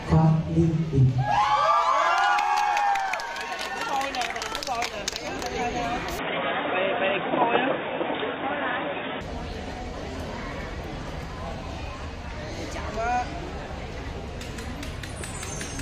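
From 6.19 to 9.21 s the sound loses everything above 3.7 kHz and shifts in level and noise floor, likely an input switched to a poorer device rather than filtering.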